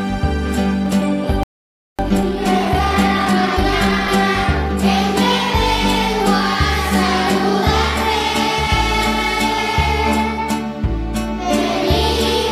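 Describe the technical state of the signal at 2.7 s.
At 2.7 s the audio is in a time-compressed catch-up, running from 1.99 to 4.19 s. After a stall, the player works through its backlog by cutting out small pieces and cross-fading the joins, so the material plays about 1.25 times faster. It sounds hurried, yet the pitch stays put. That unchanged pitch is what separates it from a plain speed-up or sample-rate mismatch, where everything would rise in tone as well.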